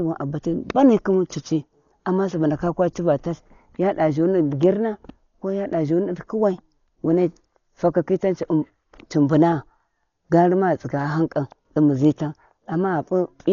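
Throughout the speech, the sound is dull and band-limited, with nothing above 7 kHz. A rough, fluttering noise surrounds tonal parts. The cause is likely heavy Dolby Digital compression, fitting a bitrate near 40 kbps. Starved frequency lines get filled with dither noise.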